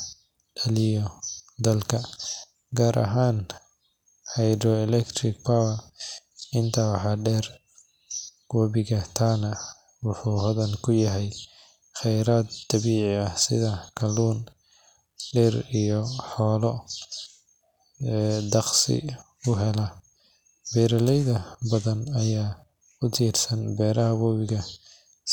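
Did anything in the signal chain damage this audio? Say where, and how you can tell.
No, nothing in the signal chain has audibly damaged this speech recording. No stage, from the wiring and converter through to storage and playback, gives itself away anywhere in the clip.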